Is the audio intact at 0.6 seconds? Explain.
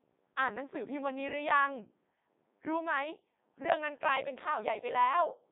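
No. At 0.6 s the speech is passing through a Codec 2 vocoder, as it does for the whole clip. The decoder rebuilds the voice from sine waves driven by pitch, voicing and a spectral envelope, so the original waveform is gone and the sound turns robotic and buzzy. The heavy damage fits the 3.2 kbit/s mode, with content held to about 150 Hz to 3.7 kHz and nothing above 3.8 kHz. A plain narrowband telephone line would sound thin but keep a natural voice.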